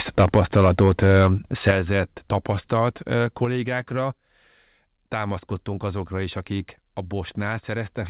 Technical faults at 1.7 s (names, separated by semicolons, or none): microphone overload; microphone volume stepped down